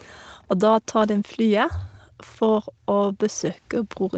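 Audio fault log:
No faults heard.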